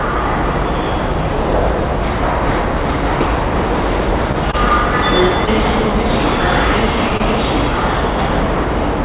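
A short stall from a late packet at 4.52 s holds the sound about 15 ms too long. A packet was due but had not arrived, so the jitter buffer ran dry and the receiver stretched the last fragment until the packet turned up, then resumed from the same point. Nothing is lost, but the sound hangs briefly with a slight buzz or dip.

Short concealed packet loss at 5.45 s leaves a 20 ms gap that never reached the decoder in time. The receiver bridged it with about 18 ms of extrapolated sound, continuing what came before, then cross-faded back into real audio. It is heard as a quick smear or wobble.

At 7.09 s the same thing happens again, another 20 ms hole patched with roughly 18 ms of invented continuation, giving a similar brief wobble.

A second short stall from a late packet follows at 7.17 s, holding the sound about 28 ms while playout delay grows by the same amount. It is a slightly longer drag, with a slight buzz or dip before the sound picks up. 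The whole clip is band-limited with nothing above 4 kHz, which fits G.711 mu-law.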